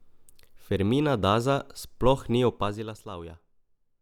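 From 2.48 to 2.99 s the speech drops by roughly 15 dB with zipper noise. The gain moves in unsmoothed steps, around a hundred per second, each leaving a tiny click. Unlike a smooth fade, this level change carries an audible ticking buzz.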